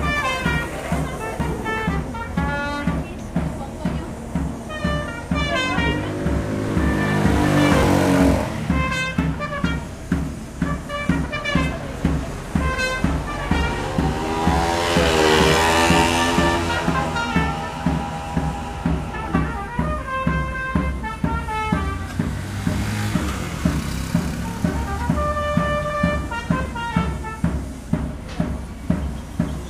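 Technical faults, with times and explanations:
1.4, 6.69, 7.83 and 26.66 s, dropped buffer (overrun): each is an abrupt skip where the sound jumps forward with no gap of silence, as if a sliver of audio was cut out and the two ends butted together. The first three lose roughly 10 ms each, and the one at 26.66 s about twice that. The likely cause is the capture software falling behind and letting the hardware overwrite a buffer before it was read.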